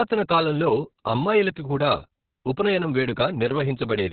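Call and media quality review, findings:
Opus voice compression throughout: SILK narrowband mode at a starved rate, consistent with about 6 kbps. Nothing above 4.3 kHz, coarse excitation; speech muffled, hoarse, slightly robotic.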